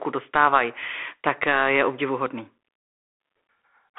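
Throughout the speech, the Bluetooth CVSD headset codec confines the sound to 250 Hz to 3.5 kHz, with nothing above 3.8 kHz. Its one-bit up-or-down tracking, consistent with a 64 kbit/s stream, lags behind loud bright sounds, leaving rasping s sounds over a grainy hiss that a clean low-pass would not add.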